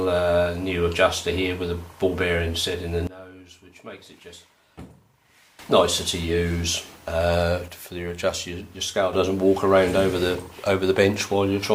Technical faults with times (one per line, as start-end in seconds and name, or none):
3.07-5.59 sudden gain jump
7.68-9.13 sudden gain jump